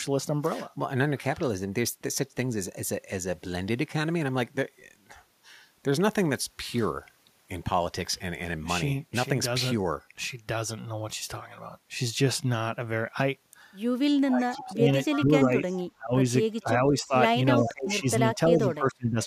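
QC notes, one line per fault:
14.29–16.14, 16.63–17.15 and 17.58–19.19 s, speech suppressed in double talk: the speech ducks in pieces, about 25 dB at its deepest in the first and last stretches and about 15 dB in the middle one, adding up to roughly a second, a third of a second and a second of loss. This is likely an echo canceller turning everything down while both ends talk at once. Unlike a network dropout, the dips follow the overlapping talk.
14.55–14.73, 15.11–15.86, 16.99–17.14, 17.59–17.72 and 18.68–18.72 s, echo leak: a copy of the speech returns 310 ms late, about 10 to 15 dB below the direct speech in the louder scraps and about 25 to 40 dB down in the weakest ones. Likely a loudspeaker on one side whose canceller let some of its pickup through. The fixed 310 ms lag sets it apart from room reverberation, which would trail off smoothly right behind the speech.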